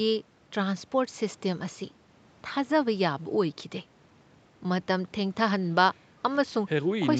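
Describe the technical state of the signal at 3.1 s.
At 3.1 s the speech comes through intact, with no fault at that moment, only the ordinary bandwidth limit of the call path, with nothing above 8 kHz.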